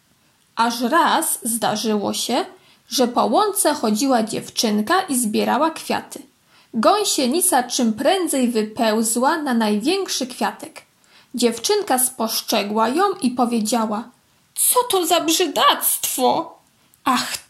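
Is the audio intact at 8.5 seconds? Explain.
Yes, the audio is intact at 8.5 seconds, with no dropout, click or other fault at that point.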